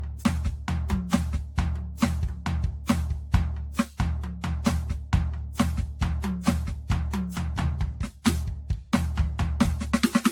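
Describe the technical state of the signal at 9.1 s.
Generation loss is present at 9.1 s, as it is across the whole music clip. The swirly, hollow texture and smeared attacks suggest the audio was likely decoded and re-encoded around seven times with a lossy codec, which fits AAC-LC at about 96 kbit/s. Each pass requantised the music on a shifted frame grid, so noise and spectral holes piled up. Transients sound blurred, and nothing is present above 19.2 kHz.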